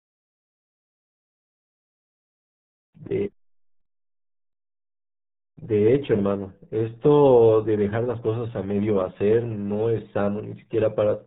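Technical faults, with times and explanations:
Throughout: RealAudio 14.4 codec. The speech is squeezed through a very low-rate dial-up codec, which fits something around 8 kbit/s, so everything above about 3.8 kHz is simply gone. Heavy coding damage leaves it muffled and gargly, with a watery, smeared texture.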